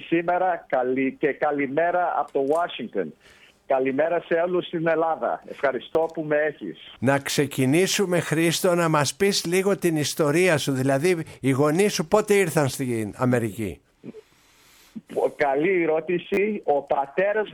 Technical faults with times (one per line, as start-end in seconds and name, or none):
5.93-5.95 repeated buffer
16.34-16.37 repeated buffer